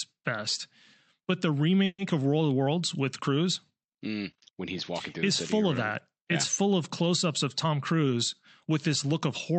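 A speech clip with two kinds of fault. At 1.85 s the sound stalls for 0.15 s in a call audio freeze. About 130 ms is a fading continuation of the last sound, then 40 ms of silence. The cause is likely delayed packets draining the jitter buffer. Speech resumes where it stopped, so nothing is lost, but everything after runs about 130 ms later. Later comes a jitter buffer speed-up. The buffer held more audio than its target, so the receiver trimmed short pitch-period pieces to cut the delay. From 7.47 to 8.14 s the speech plays at 109% speed, losing roughly 70 ms. From 8.70 to 9.58 s it plays at 105%, losing roughly 50 ms. Pitch stays the same, but the speech sounds hurried.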